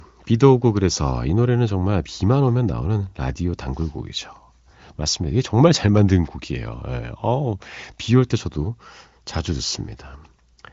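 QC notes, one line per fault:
No faults heard in this speech.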